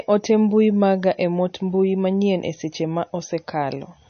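From start to finish, the speech carries plainly audible MP3 compression damage. Nothing reaches above 6.5 kHz. The treble stops at a hard ceiling. The likely cause is an encoder starved of bits, which fits a low rate around 32 kbps. It discards the top band entirely. It also drops quieter spectral detail, which flickers in and out between frames. The result sounds watery and swirling. Sibilants turn metallic, and attacks lose their edge.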